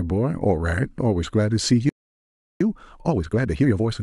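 At 1.89 s the speech just cuts out and the output sits silent until 2.61 s, roughly 0.71 s of nothing in the middle of the flow. That's a playback stall, and the likely cause is the player running dry of buffered audio or its output thread getting held up, so there was simply nothing to send to the output for that stretch. When it picks back up, it continues from where it left off.

Straight after, from 2.61 s to 3.93 s, you get time-compressed catch-up. Having fallen behind, the player chops tiny slices out of the backlog and cross-fades across the gaps, running the speech at about 1.5 times normal speed. The pitch stays where it should be, so it doesn't sound chipmunky, just noticeably rushed.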